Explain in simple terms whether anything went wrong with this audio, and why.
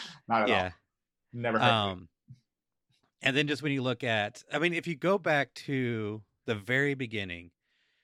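Nothing went wrong that I could hear: listening closely to the speech, nothing stood out as a problem at any point.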